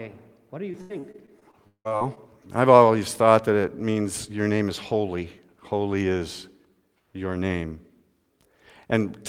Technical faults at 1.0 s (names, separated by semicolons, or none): repeated packet loss (robotic sound)